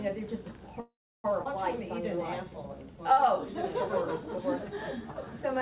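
From 0.8 to 1.27 s there is a call audio freeze: the last sound is carried on as a fading buzz or hiss, then about 320 ms of silence, before playback resumes where it stopped. The likely cause is delayed packets emptying the jitter buffer, inserting a 440 ms gap with nothing lost.

At 1.44 s comes a skip ahead. Roughly 300 ms of audio was dropped while later packets were already queued, so playback jumps forward and the two sides join almost directly, with only a brief fill of about 12 ms.

Two jitter buffer slow-downs follow, from 2.02 to 3.78 s and from 4.22 to 5.58 s. Single pitch periods or bits of pauses were repeated to rebuild the buffer's reserve, adding 139 ms and 105 ms. Both run at 93% speed with pitch unchanged, so sounds are drawn out. Throughout, the call path's band limit leaves nothing above 4 kHz.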